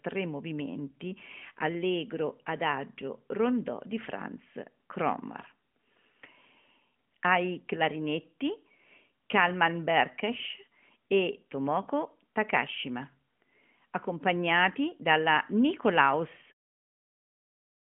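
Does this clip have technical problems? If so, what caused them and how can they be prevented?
No, there is nothing to fix or prevent: the speech has the narrowband telephone character of a 12.2 kbps mobile link, with nothing above 3.5 kHz, and the level eases out from around 16.5 s to 16.54 s as an intentional fade.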